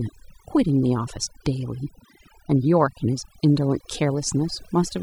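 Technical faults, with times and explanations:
Throughout, overdone noise removal. The noise reduction was pushed too hard on a noisy recording of speech. Each frequency band that sits close to the tool's noise estimate gets pulled right down or switched off. Quiet parts of the voice fall below that line and vanish with the noise. The background drops, broken up by small twinkling specks where stray bands flick on and off.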